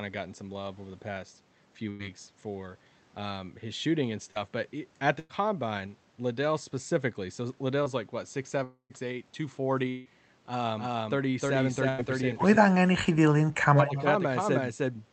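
At 1.89 to 2.01 s the sound turns into a brief held sound that fades before the audio resumes further on. This is a burst of packet loss: about 100 ms of audio never arrived in time, and the receiver stretched and faded the last sound across the gap.

At 4.31 to 4.37 s there is a quick smear, a short concealed packet loss. About 40 ms went missing, and the decoder patched it by continuing the preceding sound before blending back into the real audio.

From 5.19 to 5.31 s a second burst of packet loss produces the same fading fill. This time roughly 100 ms is concealed and the patch falls briefly silent for about 10 ms before the audio picks up again.

At 7.83 to 7.88 s another short concealed packet loss leaves a wobble. Only about 20 ms was lost and filled with a continuation of the sound just before it.

At 8.64 to 8.92 s the sound fades into a held tail and then goes dead for about a tenth of a second before returning with a piece missing. 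This is a long network dropout, likely caused by roughly 260 ms of audio failing to arrive, so the concealment ran out. A second dropout at 9.90 to 10.07 s covers about 160 ms and never reaches silence, staying a fading fill throughout.

From 10.78 s to the end, everything is heard twice, with a second copy about three tenths of a second behind at about the same level. It has a dry, full-band character with no room decay. This doubled audio track is likely a second capture path or two misaligned copies mixed together.

Inside that stretch, at 11.89 to 12.00 s, a third burst of packet loss puts another fading fill over roughly 100 ms.

Between 12.60 and 13.91 s the sound repeatedly dips, thins and drops out in pieces, by as much as about 35 dB, over about a second in total. This is speech suppressed in double talk, likely the echo canceller turning the signal down while both sides were active.

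At 13.87 to 14.03 s a delayed scrap of the sound comes back about 154 ms late, about 10 dB below the speech. This is an echo leak, likely loudspeaker pickup the echo canceller failed to remove, and it is heard through the call codec's band-limited sound, which tops out at 8 kHz.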